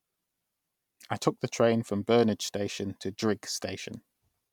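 No dropouts, clicks, distortion or other technical faults are audible anywhere in the speech.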